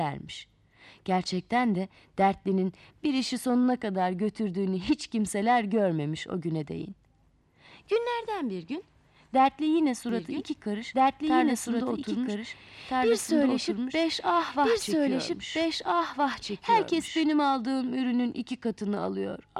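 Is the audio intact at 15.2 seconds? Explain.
No, there is a doubled audio track from 10.09 to 17.21 s, which includes 15.2 s. A second full-band copy, about as loud as the original, trails by roughly one and a half seconds with no decay or room colour, likely from a slower capture path recording the sound again.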